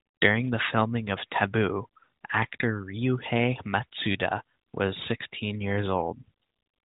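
No technical faults turn up anywhere in the clip; the speech carries the narrow, telephone-like band of the AMR narrowband mobile codec, with nothing above 4 kHz and only light coding colour, which fits its 12.2 kbps mode.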